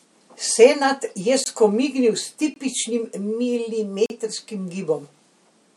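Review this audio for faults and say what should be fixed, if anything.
Blocks of digital silence cut the speech at 1.44–1.46 s and 2.54–2.56 s (20 ms each) and 4.06–4.10 s (40 ms). The signal drops abruptly to silence; unlike concealed packet loss, nothing fills the hole. Filling the output buffer reliably on time would prevent it.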